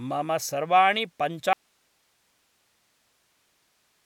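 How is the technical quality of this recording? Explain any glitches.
The recording suffers one serious glitch. At 1.53 s the speech abruptly cuts to an audio dropout to a faint residue that lasts to the end, with the signal likely lost upstream while the downstream path stayed live. Only hiss remains, roughly 45 dB below the speech. On a waveform, amplitude collapses to a thin flat band; a spectrogram shows a sharp vertical edge followed by uniform broadband noise.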